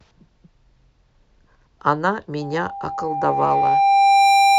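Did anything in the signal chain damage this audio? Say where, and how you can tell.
Yes. Loudspeaker feedback squeal enters at 2.41 s, in the acoustic path where the microphone hears the speaker it feeds, and lasts until the clip ends. A pure tone at 794 Hz swells over about two seconds to roughly 10 dB above the speech, because the loop gain at that frequency passes one and the tone keeps feeding itself. A spectrogram shows one bright horizontal line that strengthens steadily, and the waveform's envelope grows into a dense sinusoid.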